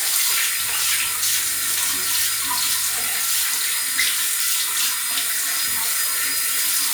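From 0.60 to 3.10 s, mains buzz intrudes: switching spikes at 50 Hz harmonics give a raspy drone, well below the sound, appearing as evenly stacked horizontal spectrogram lines.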